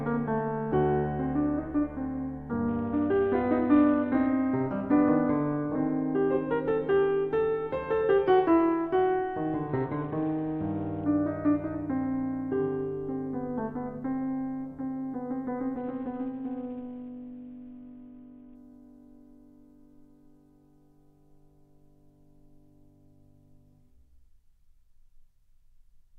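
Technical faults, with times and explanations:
2.68–4.27 s, 9.68–11.04 s and 15.77–18.55 s: Bluetooth SBC bit pool drop. The music goes dull up top and picks up a gritty haze, as the link starves the high sub-bands and coarsens the rest, consistent with the bit pool falling from 28 to 6 (around 60 kbps).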